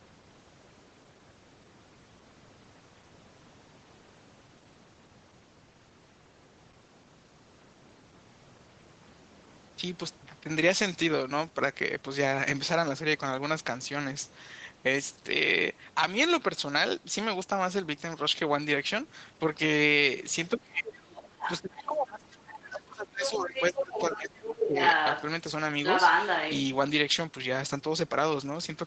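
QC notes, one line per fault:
20.55–21.02 s and 21.61–24.79 s, speech suppressed in double talk: the talker's speech sinks by as much as about 25 dB, briefly at first and then for roughly three seconds. The likely cause is an echo canceller that could not separate the talker from loudspeaker echo while both sides spoke, so it turned both down.
21.15–21.86 s, 22.48–22.79 s, 23.24–24.18 s, 24.6–25.23 s and 25.85–26.6 s, other side's voice leaking through: a second voice surfaces in short stretches. It is faint at 22.48 s and close to or slightly above the talker's level from 24.6 s on. This is likely loudspeaker playback that the echo canceller failed to remove from the microphone.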